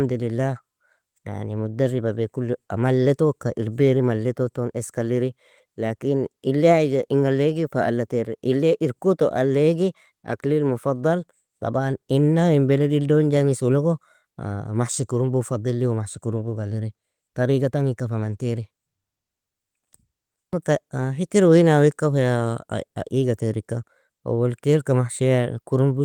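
No technical faults are audible.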